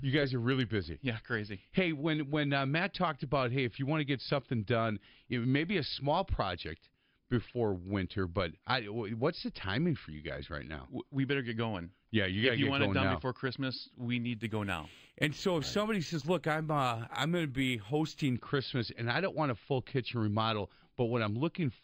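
Imaging from linear upsampling runs from 14.35 to 18.36 s. The speech was raised in rate by straight-line interpolation, which fits a jump from about 11 kHz to 48 kHz. The top is dulled, and a mirrored image spanning about 5.5 to 11 kHz, roughly 25 dB down, adds a faint metallic shimmer to sibilants.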